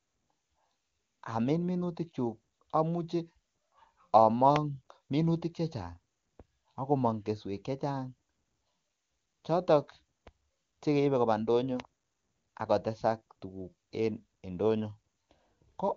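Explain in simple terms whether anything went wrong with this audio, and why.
Nothing went wrong here.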